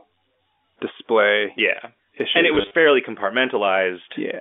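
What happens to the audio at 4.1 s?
Nothing goes wrong at 4.1 s: the speech there carries straight through on its G.711 telephone line, band-limited as that path always is, with no dropout, glitch or added noise.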